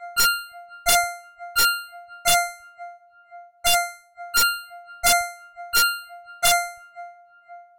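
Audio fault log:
throughout: integer overflow. The level runs about 4 dB past full scale. Peaks that should have been limited wrap to the opposite sign and jump across the whole range, so roughly one percent of samples turn into sharp, violent cracks on the loud sounds, far harsher than clipping.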